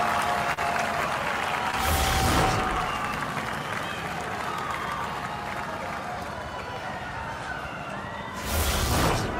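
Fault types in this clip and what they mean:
short concealed packet loss: Two brief stretches of audio, about 40 ms near 0.53 s and 20 ms near 1.71 s, never reached the decoder in time. The receiver extended the preceding sound and blended back, leaving a quick smear or wobble at each spot.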